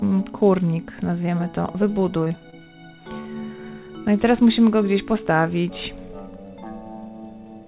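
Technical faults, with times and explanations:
2.24 to 2.68 s, repeated packet loss (robotic sound). Four short holes, the longest about 21 ms, are patched by stretching the preceding sound. About 80 ms goes missing in total. The repeated patching gives a choppy sound with pieces skipped.
3.2 s, burst of packet loss. Several packets in a row arrive too late or not at all. The receiver extends the last sound for about 48 ms and lets it fade. Playback then resumes further on, with about 40 ms missing.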